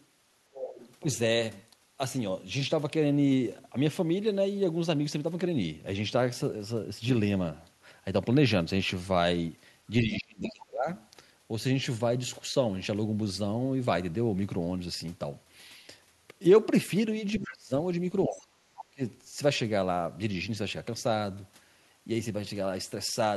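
Right from the start, 0.0 to 0.96 s, there's the other side's voice leaking through, sitting only about 10 dB under the talker. It's likely the far end playing on a loudspeaker and the echo canceller not scrubbing it out of the mic. At 10.03 to 10.88 s you get speech suppressed in double talk: the talker sinks by around 30 dB for well over half a second, likely because the canceller couldn't tell its own talker from the echo once both were going and pulled everything down. Meanwhile, from 10.47 to 11.06 s, a fainter leak shows up, about 20 dB down. The same pair returns at 17.38 to 17.51 s, a brief leak about 15 dB under, with the talker ducking about 25 dB from 17.4 to 17.73 s, roughly a third of a second. Then at 18.28 to 19.01 s the talker drops about 30 dB again for most of that stretch, while the leak comes through from 18.41 to 18.83 s, about 15 dB down.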